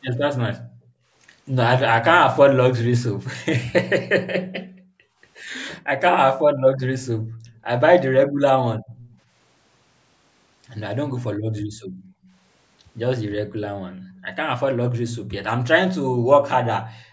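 A call recording of speech, carrying two related faults from a speakerphone end. First, an echo leak: a faint delayed copy of the speech returns about 354 ms after the original, roughly 25 to 30 dB down, briefly at 0.14–0.18 s and more sustained from 7.48 to 9.18 s. It is likely residue that the far side's echo canceller failed to remove from its microphone. The fixed lag and separate repeat set it apart from room reverberation, which smears continuously off the tail of each sound instead of repeating it after a gap. Second, the background is gated by the echo canceller: the room tone is pushed down hard while the loudspeaker plays, at 0.59–1.14 s (about 39 dB deep), 4.51–5.21 s (about 38 dB), 7.18–8.95 s (about 21 dB), 11.36–12.32 s (about 17 dB), 13.96–14.25 s (about 19 dB) and 16.94–17.12 s (about 14 dB), then springs back. Unlike a noise gate, which closes during pauses, these dips follow far-end playback and can cut in while sound is present. 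The band ending at 8 kHz comes from the call's microphone processing.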